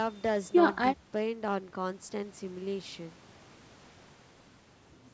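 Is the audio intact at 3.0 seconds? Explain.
Yes, the speech at 3.0 seconds is intact, with no fault at that moment beyond the normal bass trimming of call microphone processing.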